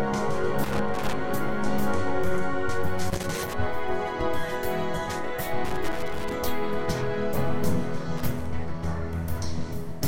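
Four bursts of loose connector crackle break up the audio: 0.64 to 1.13 s, 3.10 to 3.54 s, 5.65 to 6.33 s, and 8.17 to 8.46 s. Each sounds like an irregular scratching crackle. A worn or dirty contact in the signal path is making and breaking as it shifts, so the signal is chopped on and off in rapid, uneven steps. Any DC present on the line turns those interruptions into pops.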